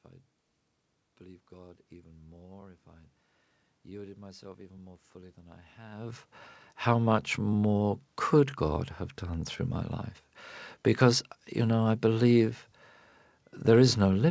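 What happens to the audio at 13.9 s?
At 13.9 s nothing goes wrong; the speech carries on intact through that moment.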